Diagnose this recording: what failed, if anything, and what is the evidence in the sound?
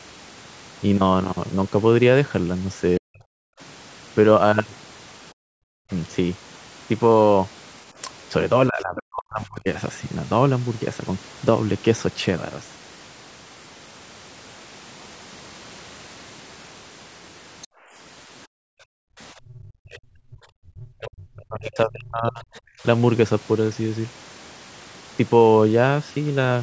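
Speech suppressed in double talk, call processing: between 2.98–9.67 s and 19.43–22.48 s the speech drops by roughly 40 dB, likely the echo canceller muting during double talk; waveform shows hollowed gaps.

Background gated by the echo canceller: the room floor dips at 3.53–5.35 s (about 34 dB), 17.67–19.15 s (about 40 dB) and 22.76–22.83 s (about 17 dB), as darkened spectrogram patches.

Other side's voice leaking through: brief foreign voice scraps at 8.95–9.03 s (about 15 dB below speech) and 17.62–17.67 s (about 25 dB below), likely incomplete echo cancellation, faint spectrogram smears.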